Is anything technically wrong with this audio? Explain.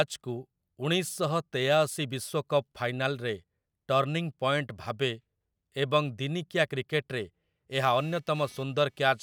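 Yes. From 7.75 s to the end at 9.23 s, right after "ଦିନିକିଆ କ୍ରିକେଟରେ", computer activity noise appears: a buzzing, chirping texture pulsing at around 300 Hz, roughly 30 dB below the speech. Changing load on the processor, graphics card or mouse disturbs the ground shared with the audio circuit. Unlike steady mains hum at 50 or 60 Hz, this buzz starts abruptly and follows the machine's workload, not the speech.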